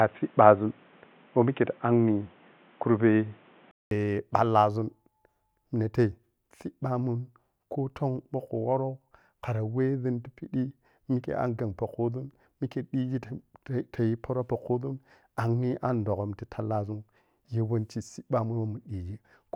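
Input switched to a poorer device, from the start of this speech recording to 3.91 s. The opening sounds dull and boxy, with nothing above 3.8 kHz, a level about 5 dB different, and its own background noise roughly 35 dB under the speech. A gap of about 200 ms marks the change, after which the full band returns. The likely cause is a narrowband microphone or headset call profile feeding the input before the main device took over.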